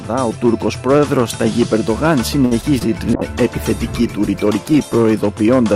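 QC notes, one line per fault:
Throughout: hard clipping, peaks driven about 4 dB past the ceiling and cut flat, so a small fraction of samples add crackle on loud moments rather than constant fuzz.
2.45–2.53 s: short stall from a late packet, the sound held about 57 ms while the buffer waited, nothing lost, a drawn-out sustain instead of a gap.
2.61 s and 2.79–2.88 s: short concealed packet loss, about 20 ms missing each time and filled by continuing the last sound, heard as a brief smear where content vanishes, unlike the stall.
3.14–5.07 s: call bitrate drop from 128 to 23 kbps for about 1.9 s, coarser coding and lost highs making the sound watery and muffled until it recovers.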